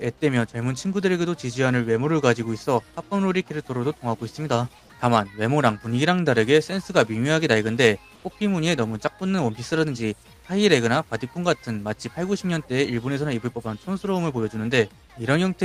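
From 8.15 to 8.23 s, comfort noise in place of the background: an 80 ms stretch of steady, featureless noise about 2 dB quieter, likely Opus-style discontinuous transmission.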